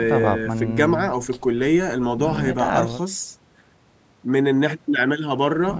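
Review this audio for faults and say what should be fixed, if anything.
No faults turn up in the audio, so nothing needs to be fixed.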